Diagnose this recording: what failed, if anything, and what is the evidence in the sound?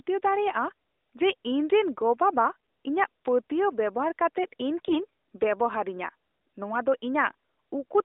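AMR bit errors on the network link. From 2.56 to 2.68 s and from 4.86 to 5.05 s the narrowband speech turns hoarse, scratchy and gargly, while pitch and level hold. Flipped low-protection bits misplace the excitation pulses and skew gain and spectral values.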